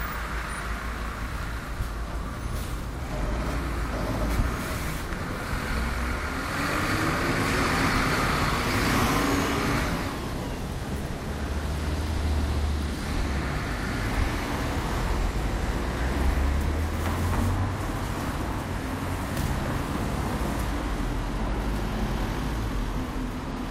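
At 1.43, 5.43, 9.42 and 13.41 s there's a tiny click or skip, an overlap between stream segments. Adjacent 4-second segments claim the same moment, so the player drops roughly 10 to 18 ms of sound that wasn't actually doubled, and the waveform jumps.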